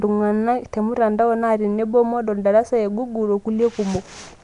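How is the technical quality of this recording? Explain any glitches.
Technical quality is poor throughout, with one fault. A likely Nellymoser compression pass, at a rate pointing to about 44 kbps, codes coarse blocks, fills weak bands with noise and cuts everything above 10.6 kHz, leaving the speech rough, hissy and underwater-smeared.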